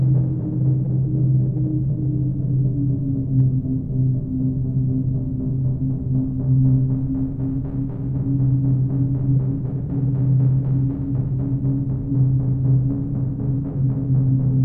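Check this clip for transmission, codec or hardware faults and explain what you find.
I found no faults in this clip.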